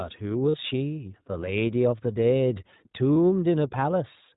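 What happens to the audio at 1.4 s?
At 1.4 s, as throughout, there is iLBC codec damage: nothing above 4 kHz, plus a rough, synthetic grain from independently coded frames that a clean low-pass filter lacks.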